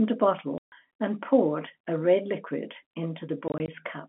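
Hard-edged dropouts cut the speech from 0.58 to 0.72 s, a solid 140 ms hole, and again from 3.48 to 3.68 s, where short gaps of 20 ms or less stutter across 200 ms. This is packet loss filled with silence, with gap lengths that fit 20 ms packets, heard over the narrow G.711 telephone band.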